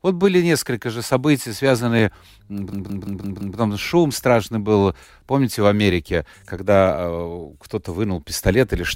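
A system hang loop from 2.73 to 3.58 s in this speech clip, just before "шум страшный был помните", repeats one 171 ms slice five times at about 5.9 Hz. The result is a machine-gun stutter from hardware cycling a frozen buffer, which fits 8192 samples.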